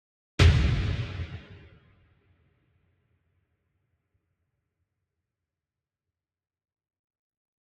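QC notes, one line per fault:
throughout: noise suppressor applied to sounds. The audio pumps and thins, with sharp onsets getting through while sustained parts and decaying tails drop away by about 20 dB. A speech-tuned suppressor is mistaking steady content and ambience for noise and pulling it down.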